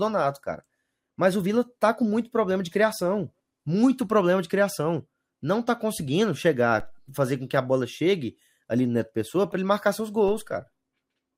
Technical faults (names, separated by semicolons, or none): DC step